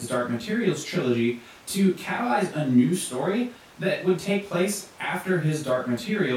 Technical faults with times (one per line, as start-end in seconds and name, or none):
none